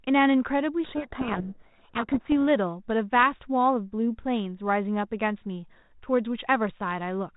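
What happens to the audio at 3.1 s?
Nothing goes wrong at 3.1 s; the speech there is intact, carrying only the light, steady coloration of the 32 kbit/s G.726 ADPCM telephone path, which limits the sound to below 4 kHz.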